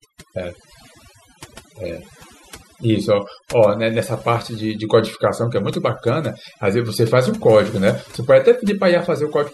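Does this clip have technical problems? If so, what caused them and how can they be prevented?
Yes. Throughout the speech, the pauses fall to near silence sprinkled with twinkling specks: overdone noise removal, where a noise reducer pushed bands near its noise estimate far down, taking quiet vocal detail too. Prevent it by using gentler reduction settings.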